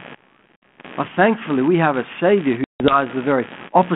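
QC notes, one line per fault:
throughout: computer activity noise. There's a buzzy, scratchy layer pulsing at around 70 times a second, sitting roughly 20 dB under the speech. It tracks what the computer is doing rather than what's being said, because processor, graphics or mouse load shifts the ground that the audio circuit shares, and that wobble ends up in the signal. It stays audible even through the narrow 150 Hz to 3.4 kHz band that the 32 kbit/s G.726 line passes.
0.57–0.62 s and 2.64–2.98 s: packet loss on an ADPCM call. Each gap is a hard-edged hole of silence, about 60 ms in the first and 160 ms in the second, which suggests a few packets dropped early and several more later. ADPCM only sends differences from an adaptive prediction, so once packets go missing the decoder's predictor and step size no longer match the sender's. The speech comes back slightly distorted, then settles within a few tens of milliseconds.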